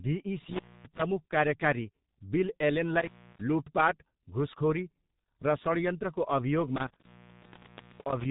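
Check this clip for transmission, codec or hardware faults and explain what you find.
Two things are going on: the whole clip has been through a G.723.1 codec, and there are three dropouts from an intermittent contact.

The G.723.1 codec damage runs the full length of the speech. It's running at 6.3 kbit/s, squeezing everything into chunky 30 ms frames and a slowly updated voice model, and nothing gets through above 3.8 kHz. The damage is heavy: the voice comes out muffled and hoarse, and consonants smear into each other because the fast detail simply isn't kept.

The intermittent contact shows up three times: 0.42 to 1.02 s, ending just before "कार्यकारी बिल"; 2.99 to 3.41 s, right after "कार्यकारी बिल"; and 6.76 to 8.26 s. A loose plug or cable briefly loses its connection, so the signal drops out with crackle where the contact breaks and remakes, and faint hiss is left in the gap. The line stays open for about 262 ms, 284 ms and a long 929 ms.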